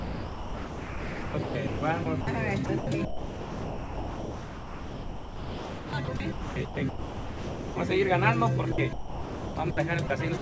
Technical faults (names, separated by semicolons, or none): sound chopped by the voice detector; sound dropped by the voice detector